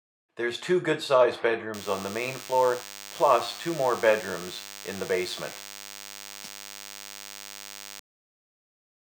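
A steady, thin buzz sits under the audio from 1.74 s to 8.0 s, pitched at 100 Hz but rich in harmonics so it sounds edgy rather than like a low hum, and lying roughly 15 dB below the wanted sound. This is DECT cordless phone buzz: a nearby DECT handset or base station transmits a short radio burst every 10 ms, and the audio circuitry rectifies those bursts, turning the 100 Hz pulse rate into an audible buzz.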